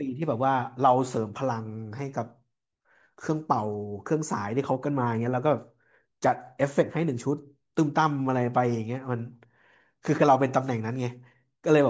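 No technical faults can be heard anywhere in the speech recording; the signal holds steady from beginning to end.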